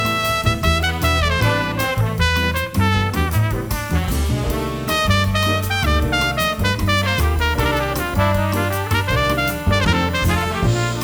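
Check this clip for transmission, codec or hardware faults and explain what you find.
USB whine enters at 6.86 s and persists to the end: a fixed-pitch tone on a 1 kHz fundamental, strongest at its 19 kHz harmonic, roughly 25 dB below the signal. It comes from 1 ms USB frame current coupling into the audio through power or ground.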